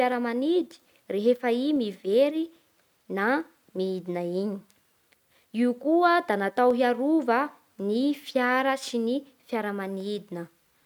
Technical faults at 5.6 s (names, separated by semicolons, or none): clock drift buffer slips